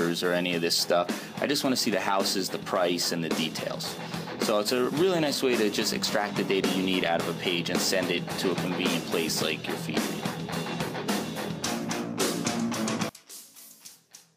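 From 13.09 s to the end at 14.36 s, the sound drops by about 20 dB to a faint copy, with its centre largely gone. The likely cause is one channel inverted, so material shared by both channels cancels on mono summing.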